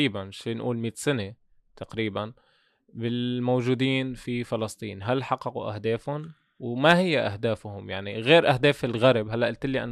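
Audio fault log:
No audible faults anywhere in this speech recording.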